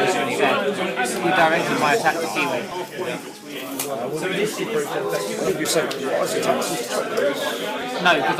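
Compressed frames skipped at 5.47 to 5.50 s: the decoder never plays a short run of 20 ms frames, so the sound jumps ahead by roughly 70 ms, which points to about three frames lost.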